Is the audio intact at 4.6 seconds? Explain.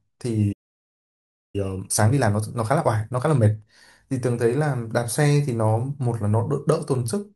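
Yes, the speech at 4.6 seconds is intact, with no fault audible at that moment.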